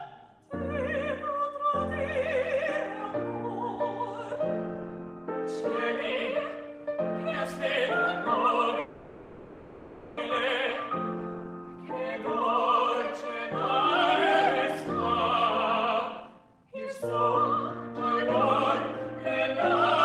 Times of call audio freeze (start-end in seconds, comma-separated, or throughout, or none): 8.79-10.18